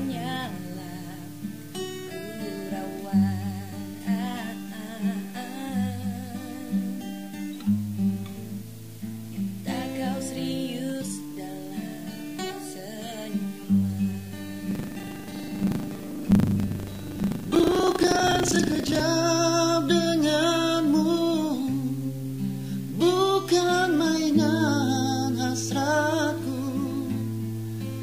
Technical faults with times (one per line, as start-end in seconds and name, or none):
14.68-19.01 buffer tearing